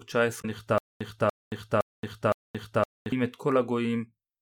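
Speech with two faults. From 0.38 to 0.45 s, damaged data in a compressed stream produces a brief glitch as the decoder resyncs. From 0.78 to 3.12 s, a stutter with silent gaps repeats the same 289 ms fragment four times, each followed by 225 ms of digital silence, every 514 ms. A stream stalling and replaying its last buffer is the likely cause. The empty gaps distinguish it from a seamless repeat loop.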